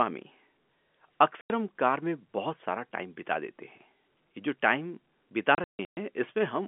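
At 1.41 s the speech drops into a clean 90 ms hole, and from 5.55 to 5.97 s there's a choppier stretch. That's packet loss filled with silence: about 300 ms of gaps, the longest run 150 ms. The gaps have hard edges against the narrowband telephone sound, and the 90 ms hole fits three 30 ms packets going missing.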